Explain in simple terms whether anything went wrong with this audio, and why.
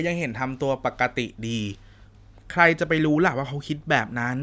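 Nothing went wrong here.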